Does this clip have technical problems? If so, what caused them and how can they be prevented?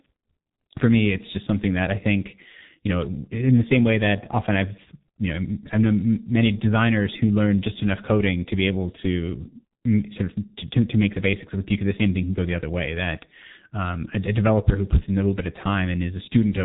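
Yes. Throughout, G.723.1 codec damage is heavy: nothing above 3.8 kHz, and hoarse, smeared consonants consistent with roughly 6 kbit/s. Unlike a plain band limit, the voice itself sounds rough. Use a wideband codec at higher bitrate.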